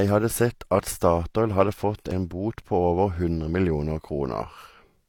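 Right at 2.11 s in this speech clip there's a tiny skip, just before "en bot på". That's an overlap between stream segments: two chunks claimed the same stretch of time, so the player trimmed the doubled part, except the audio wasn't actually duplicated. About 15 ms of real sound got dropped and the waveform jumps across the gap. Landing right at the two-second mark, it fits 2-second segments.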